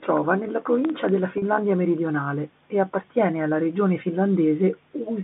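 Right at about 0.85 s the speech picks up a short burst of processor overload crackle that lasts until roughly 1.09 s. What's going on is the processor falling behind on its tiny audio buffers, each well under a millisecond, and missing a handful of deadlines back to back. Each time, a scrap of old audio gets played again with hard edges, so you hear a gritty, tearing crackle laid over the speech that clears once the load drops.

A moment later, from 1.38 to 1.42 s, there's packet loss with pitch repetition, just before "meridionale e appartiene alla". About 40 ms of audio went missing, which fits a couple of lost packets. The receiver papered over the hole by repeating the last pitch period, so instead of a dropout you get a brief held, slightly buzzy note before the speech carries on. Since it all runs over a G.711 A-law phone line, the band stays narrow, topping out around 3.6 kHz.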